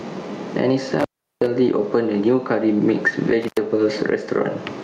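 Right from the start there's gain pumping, with the level swinging by something like 15 dB. That points to the input gain likely being set way too hot, with a fast limiter clamping down on each peak, so everything ends up squashed and flat.

Then there's an intermittent contact dropout at about 0.99 s, running to 1.46 s. The signal cuts out for roughly 0.37 s with a crackle on either edge and just faint hiss underneath, the classic sign of a loose cable or plug opening up. It happens again at 3.43 s to 3.57 s, a shorter break of about 90 ms.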